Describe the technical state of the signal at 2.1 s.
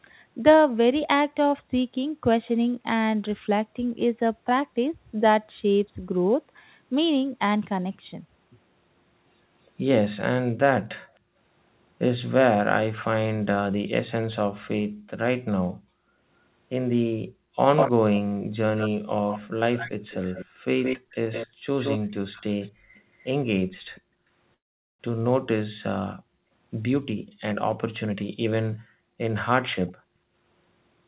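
At 2.1 s the speech is intact, with no fault, only the narrow telephone-style band of a G.711 call path that carries nothing above 4 kHz.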